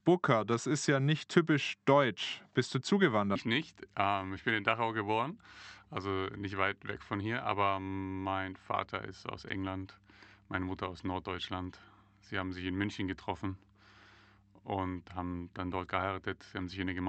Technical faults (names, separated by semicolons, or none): skip ahead